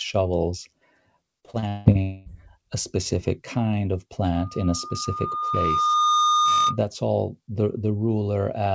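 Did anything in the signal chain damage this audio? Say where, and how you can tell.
Yes. From 1.40 to 1.98 s the speech turns choppy and robotic, with a stuttering texture. This is repeated packet loss at the network stage: six gaps, the longest 174 ms, each patched by stretching the last sound, so about half that span is synthesized.

Straight after, from 2.02 to 2.29 s, a smeared buzz continues for about 240 ms with no real speech under it, then audio resumes at "a specific kind of". This is likely a long network dropout, with the receiver extending the last packet to cover the hole.

From 4.35 to 6.79 s, between "a specific kind of" and "all the", a single 1.2 kHz tone swells over roughly two seconds to about 5 dB above the speech. That is loudspeaker feedback squeal, an acoustic loop where the microphone hears its own loudspeaker and the loop gain at that frequency exceeds one.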